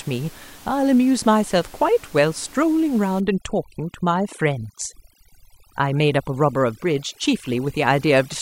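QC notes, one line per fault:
3.20 to 8.41 s, overdone noise removal. From 3.20 s to the end, a noise reduction stage acts far too hard. Room noise that sat about 24 dB below the speech drops and breaks up. Twinkling specks remain where single bands flicker on and off. Bands close to the estimated noise level are cut or switched off. Quieter parts of the speech fall with them.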